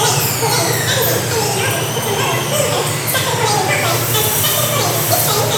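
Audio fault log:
Throughout: audio read two samples at a time (double speed). Each pair of samples is taken as a single frame, as if the stream held two channels or samples twice as wide, so everything plays at 2x speed and a full 12 semitones (one octave) higher. Unlike a simple sample-rate mismatch, which also speeds and raises the sound, this halving without filtering folds high frequencies back down.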